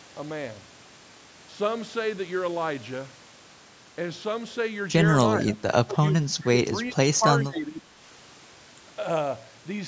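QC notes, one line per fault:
5.39–5.59, 5.83–6.14, 6.46–6.74, 6.90–7.25, 7.43–8.00 s, speech suppressed in double talk: speech dips about 15 dB (about 20 dB at 7.43–8.00 s). This is likely the echo canceller mistaking talker for loudspeaker echo. The waveform envelope pinches in, and spectrogram energy fades in patches.
6.41–6.45 s, echo leak: a brief scrap of voice returns 428 ms late, about 25 dB below the speech, likely residual loudspeaker pickup the canceller missed. On the spectrogram it shows as a faint delayed copy of earlier harmonics.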